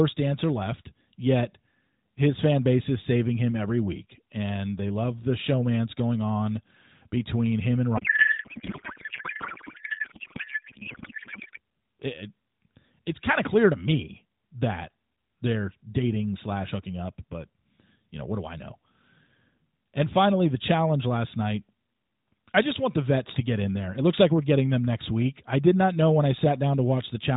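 Speech passed through the AMR narrowband mobile codec, band-limited below 4 kHz with light coding colour that fits the 12.2 kbps mode, breaks into a codec payload misread from 7.98 to 11.58 s, right after "on between him and". Octet-aligned AMR frames are unpacked as bandwidth-efficient, so the decoder turns shifted bits into garbled warble that barely follows the speech. Unlike packet loss, there are no gaps or concealment fades, just continuous nonsense until the framing realigns.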